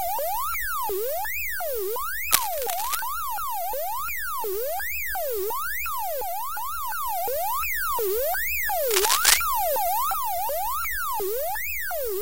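Cable scratch noise rasps over the sound from 2.32 to 3.00 s, about level with it, then louder from 8.89 to 9.38 s. It likely comes from a worn contact shifting resistance.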